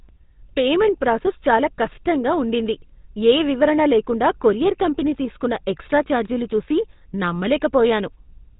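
From start to finish the speech carries the damage of the GSM full-rate codec, the sound pointing to a 13 kbps stream. The codec rebuilds the voice from a vocal-tract model excited by evenly spaced pulses, so the result has a plainly audible buzzy, gravelly roughness, and nothing above 4 kHz survives. A simple low-pass filter would only dull the speech. The grating buzz in the voiced sounds is what marks this as the codec.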